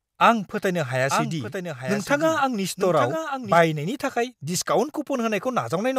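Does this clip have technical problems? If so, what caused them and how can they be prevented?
Yes: a doubled audio track from 1.10 to 3.58 s, where a second copy of the speech trails about a second behind, roughly 5 dB quieter, likely from a slower duplicate capture path. Unlike echo, it has no decay and starts abruptly. Prevention: route each source once and mute duplicate inputs.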